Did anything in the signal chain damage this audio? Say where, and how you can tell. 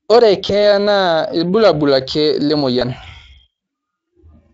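Yes. At 0.47 to 0.52 s, just before "na irbulabul ake", and at 2.79 to 2.82 s, just after "na irbulabul ake", the sound briefly smears into a buzzy tone or coloured noise that fades. This is VoIP packet loss concealed by the speech codec, a network fault. Each gap fits one lost 20 ms frame that the Speex decoder filled by extending its last pitch and filter.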